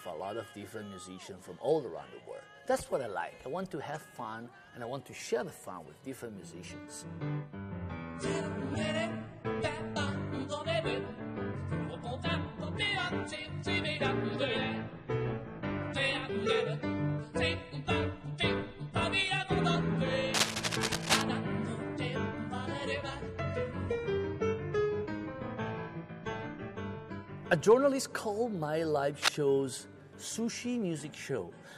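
Cable scratch noise appears from 20.34 to 21.22 s, roughly as loud as the sound itself, and again from 29.22 to 29.39 s, somewhat louder than it. Both bursts scratch and rustle unevenly, likely from a worn cable or connector shifting and rapidly changing its contact resistance.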